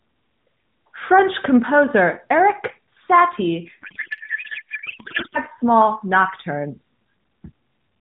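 Speech passed through AMR-NB, band-limited below 4 kHz with light coding damage consistent with the 12.2 kbps mode, has a codec payload misread from 3.82 to 5.39 s, ending just before "small nocturnes". For that stretch the speech gives way to garbled noise and warble that barely tracks it. The decoder is taking octet-aligned AMR frames as bandwidth-efficient, so every field sits at the wrong bit offset until the framing matches again.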